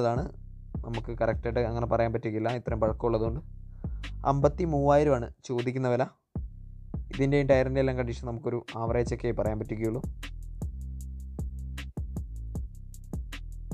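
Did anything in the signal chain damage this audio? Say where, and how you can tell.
No, no signal-chain damage heard.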